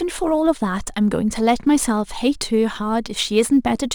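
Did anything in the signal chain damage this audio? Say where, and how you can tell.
Yes, at the converter: sample clock jitter, an unsteady sampling clock wandering by a few microseconds, runs through the whole speech clip. Timing errors scale with waveform slope, so a hiss-like roughness about 30 dB below the signal rides on loud, bright sounds and disappears in the pauses.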